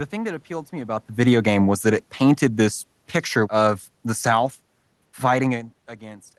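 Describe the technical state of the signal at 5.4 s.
At 5.4 s the audio is intact, with only the room noise beneath the speech and a level change consistent with the talker shifting position at the microphone.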